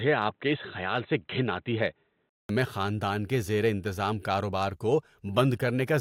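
From the start up to about 2.49 s the speech sounds narrow and boxy, with nothing above 4 kHz, and then it opens up again after a gap of about 200 ms, just before "میں خاندان کے زیر". That pattern points to an input switched to a poorer device, likely a headset call profile or a second mic. The level barely shifts across the switch, and the band-limited stretch carries a faint floor of its own, roughly 50 dB down.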